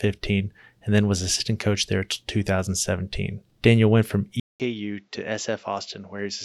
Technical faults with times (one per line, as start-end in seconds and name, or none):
4.40-6.45 input switched to a poorer device